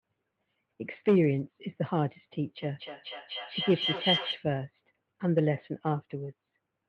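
Feedback howl runs from 2.57 to 4.48 s. A microphone and loudspeaker sharing one room form a loop that adds level on each pass, so the repeats of the speech grow instead of dying away and narrow to the pitch the loop favours, here around 3 kHz. The result is a whistle built up over a loop delay of roughly a fifth of a second, and it peaks about 5 dB below the speech.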